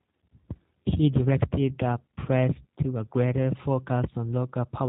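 From start to finish the speech carries plainly audible G.729 codec damage. Nothing above 4 kHz survives, and the voice is rebuilt from a vocal tract filter, pitch predictor and sparse pulses, giving a rough, slightly synthetic quality consistent with 8 kbit/s coding.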